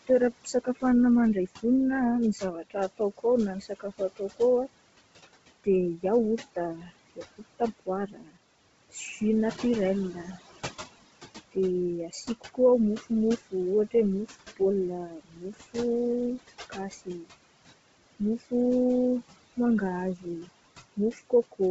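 From the start, noise suppressor artifacts run through the whole clip. The room noise, sitting about 15 dB under the speech, is pulled down by about 18 dB between phrases and then rises back under them. That pumping with the gaps sets it apart from a fixed filter.

Throughout, the speech also has a grainy, breathy edge, and nothing is heard above 7.7 kHz. This heavy damage is likely Bluetooth LC3 compression at a low bitrate, which fits about 16 kbps with 10 ms frames. Unlike the suppressor's pumping, the graininess stays on the voice itself.

Speech cut by the noise suppressor appears in eight stretches: 0.07–1.64, 2.33–4.4, 5.64–8.38, 8.91–10.37, 11.52–15.76, 16.7–17.31, 18.19–18.52 and 20.16–21.6 s. Within each stretch, brief pieces of soft speech drop by about 13 to 21 dB and sound swallowed. Here the speech itself is turned down, not just the background.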